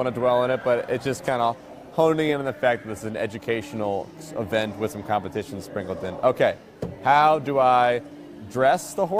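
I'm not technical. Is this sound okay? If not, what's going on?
No. From 0.61 s to the end at about 9.19 s, there is a click roughly every 1.07 s, about ten in all. This is clock drift buffer slips. Two devices likely ran on slightly different clocks, so every so often a few samples were dropped or repeated.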